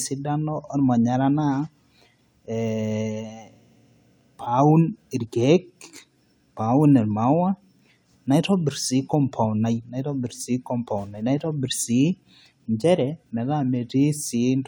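Listening closely to the recording, nothing stood out as a technical problem at any point.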